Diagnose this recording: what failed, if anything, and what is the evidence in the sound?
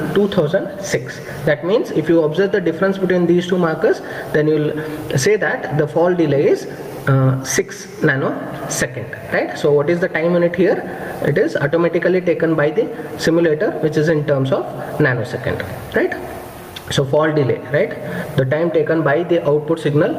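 The gain moves for the whole clip, a swing of about 20 dB, with loud and soft passages squashed toward one level. This is gain pumping, likely from input gain set far too high and a fast limiter pulling it down on every peak.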